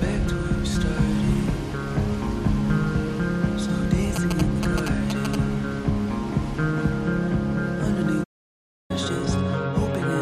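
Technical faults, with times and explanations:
4.16 to 5.35 s, GSM signalling bursts: A galloping run of short buzzes sits on top of the audio for just over a second. The buzz repeats at about 217 Hz, the frame rate of a 2G phone transmitting. Here the phone sends only brief groups of bursts, as it does while signalling to the network. The audio circuit rectifies that radio energy, so it becomes audible. It lands roughly 5 dB below the wanted sound.
8.23 to 8.91 s, playback stall: The audio cuts out abruptly in mid-flow and stays silent for about 0.66 s. There is no fade or tail, just a hard gap. The output simply received nothing to play for that span. The likely cause is the player running short of data, or its thread being blocked, until it recovered. The sound then resumes. A gap this long is clearly heard as a break.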